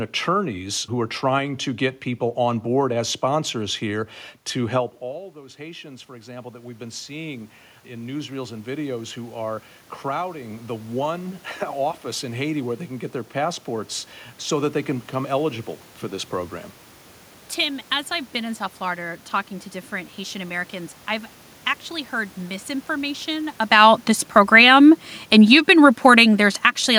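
Just after "sponsors here to help", at about 5 s, the speech level drops by roughly 17 dB as the talker moves away from the microphone. From 5.01 s to 13.96 s an automatic gain rise follows: the gain control slowly adds about 14 dB, lifting the voice and the room noise together until "so that they can". That shared swell of the background is what marks it as gain control rather than the talker's own movement.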